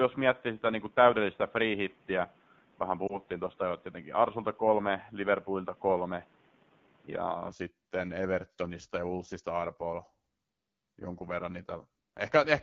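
The whole clip goes through the AMR wideband (HD Voice) codec, and it sounds rough and raspy, plainly so, which fits one of its lowest modes, around 8.85 kbit/s. At about 3.07 s there's a lost AMR speech frame: the decoder bridges the missing 20 ms from the last good frame, giving a quick dip or warble before things recover.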